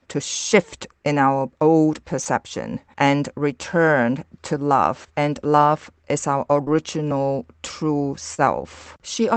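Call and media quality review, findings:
Short concealed packet loss, receiver jitter buffer/decoder PLC: packets missed playout, about 40 ms at 2.21–2.35 s after "shift in our old", 20 ms at 6.64–6.68 s after "love is our", and 40 ms at 8.34–8.40 s. The holes were filled by extrapolating the preceding speech, then crossfaded back, heard as brief smears or wobbles.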